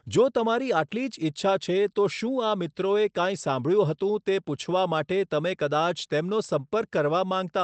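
No technical faults can be heard in this speech, which comes through a call path whose bandwidth stops at about 8 kHz.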